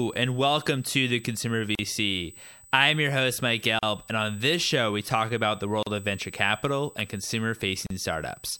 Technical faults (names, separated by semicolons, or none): USB whine; gap at a join of encoded pieces